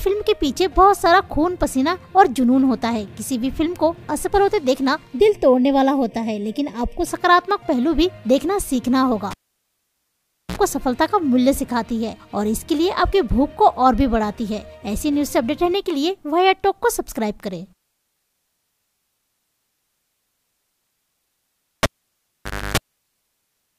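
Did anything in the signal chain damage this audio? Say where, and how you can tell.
Yes. From 5.19 to 7.07 s the sound turns hollow and phasey, with channel delay (comb filtering) at the mono fold-down. One channel lags the other by roughly 0.4 ms, so summing cancels shared content at evenly spaced frequencies, the first notch around 1.5 kHz.

There are two cable pulled and plugged in events in the analogue wiring. At 9.31 s, a pop drops the sound for 1.22 s, then a 60 ms burst of 60 Hz buzz as the tip touches, and another pop at 10.58 s. At 21.83 s, a pop leads to 0.89 s of near silence, then 294 ms of 50 Hz buzz before it returns at 22.77 s.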